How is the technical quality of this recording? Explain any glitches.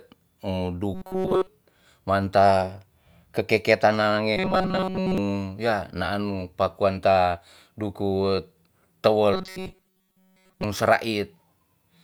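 Three glitches break up the speech. Robotic sound from repeated short buffers occurs at 0.94 to 1.47 s, 4.37 to 5.18 s and 9.34 to 10.64 s. The voice becomes a rigid metallic buzz near 188 Hz. The first stretch is fully affected; the later two mostly. The likely cause is late audio, with a roughly 5 ms chunk looped until new data arrives.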